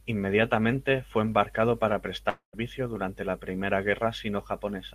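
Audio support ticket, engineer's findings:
Speech, 2.29–2.56 s, between "fue embarcado para" and "durante la": long network dropout. Audio stalls and the last sound is stretched into a fading buzz, then about 100 ms of silence before the return. Roughly 240 ms of speech is missing. Likely cause is a burst of lost packets with receiver-side concealment. Spectrogram: smeared, repeating harmonic band decaying into a blank gap. Waveform: periodic tail shrinking to flatline, then an abrupt restart.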